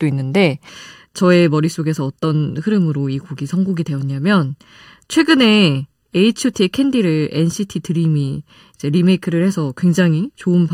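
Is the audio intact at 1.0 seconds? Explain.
No. From 0.69 s to the end, one channel lags the other by about 0.7 ms, and when the two are mixed to mono they interfere. This is channel delay (comb filtering): content shared by both channels cancels at regularly spaced frequencies, with the first notch near 700 Hz and further notches stepping upward from there. At 1.0 s the speech therefore sounds hollow and phasey.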